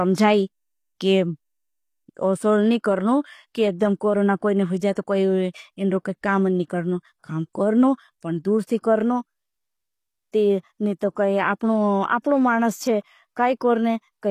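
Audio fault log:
throughout, HE-AAC compression: the treble is likely rebuilt by band replication at a low bitrate around 24 kbps, leaving gritty, lispy sibilants and no content above 15 kHz.
4.93–4.97 s, pre-echo: quantisation noise smears about 41 ms ahead of an attack between "कोरोना कोई ने हुझाए" and "इन्रो काम नी करनो", adding a brief hiss and softening the onset.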